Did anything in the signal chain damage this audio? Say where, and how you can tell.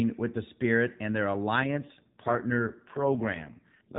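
Yes, there's an AMR rate drop in the codec, triggered by the network. From 1.56 s to the end the band stays the same with no gap, but the speech turns buzzier and more synthetic. That fits a switch from 12.2 down to 4.75 kbps, leaving fewer bits for the excitation pulses.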